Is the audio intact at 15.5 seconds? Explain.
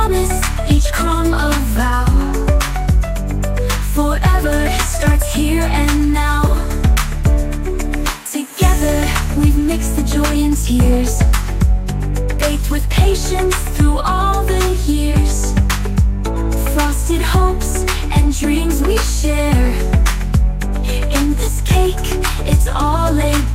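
Yes, at 15.5 seconds the audio plays through cleanly, with no dropout, click, distortion or other fault at that point.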